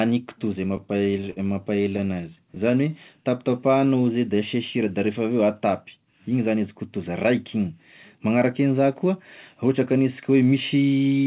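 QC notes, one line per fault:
0.77–2.75 s, repeated stalls (stutter): seventeen brief hitches, the longest 55 ms, where packets arrived late and the buffer ran dry, so the last sound was stretched to cover each wait. Nothing is lost, unlike dropouts; the audio just drags and catches.
2.88–4.14 s, jitter buffer slow-down: single pitch periods were repeated over and over to rebuild the buffer's reserve, adding 114 ms and running at 92% speed. Pitch holds steady, which separates it from a tape-style slowdown, leaving drawn-out sounds.
6.04–7.35 s, jitter buffer speed-up: an overfull buffer was trimmed by cutting short pitch-period pieces in rapid succession, around a tenth of a second in all, so the audio runs at 107% speed. It sounds hurried at unchanged pitch, with no missing chunks, unlike clipped gaps.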